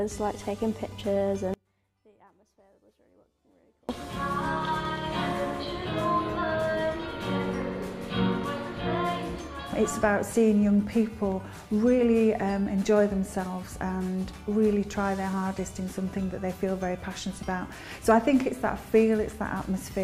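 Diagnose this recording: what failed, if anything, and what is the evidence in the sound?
An audio dropout to a faint residue runs from 1.54 to 3.89 s, about 2.35 s. The sound cuts out abruptly, then returns abruptly. The gap holds only faint sound, roughly 35 dB down. The likely stage is analogue wiring: the signal connection broke while the following path stayed live.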